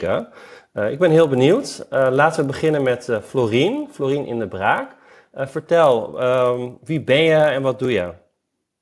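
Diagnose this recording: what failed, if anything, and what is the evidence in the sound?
The sample-rate conversion stage failed: the resampler was restarted on every block. Each 20 ms block was converted in isolation, so the filter at every block edge worked from silence or from the wrong end of the block instead of the true neighbouring samples. Each boundary gets a small error, and across the whole speech recording this is heard as a steady 50 Hz buzz that rides on the signal and drops out in pauses. The sound points to a halving of the rate, 48 kHz down to 24 kHz.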